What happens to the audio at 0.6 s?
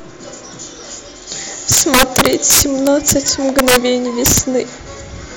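Nothing goes wrong at 0.6 s; the speech there is intact, with no dropout, click, distortion or other fault.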